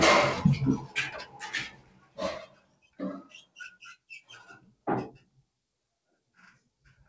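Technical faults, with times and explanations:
Throughout: noise suppressor applied to sounds. A suppressor tuned for speech stays active on non-speech audio. It treats steady parts and tails as noise, so level swings by around 20 dB. Onsets pass, held parts sink, and the sound pumps and thins. Nothing is heard above 8 kHz, which fits a G.722 call path.
0.80–0.96, 1.14–1.47, 1.69–2.18, 2.46–2.99, 3.24–3.56, 4.59–4.86 and 5.20–5.49 s: sound cut by the noise suppressor. In each stretch the suppressor mistakes the sound for noise. Level drops by about 12 dB, and by about 13 dB at 2.46–2.99 s. Sustained and fading parts sink.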